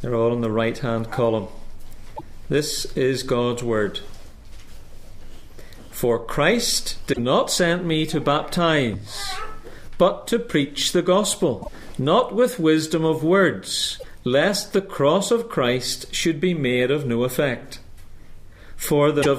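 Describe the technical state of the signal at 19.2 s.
Damaged data in a compressed stream occurs at 19.19 to 19.26 s, a span of about 70 ms near the very end of the clip. Part of the encoded data arriving there is corrupt, so the decoder misreads or discards the affected frames, loses its place in the stream and hunts for the next valid frame header before playback resumes. The result is a short chirp, squawk, click or brief hole at that point.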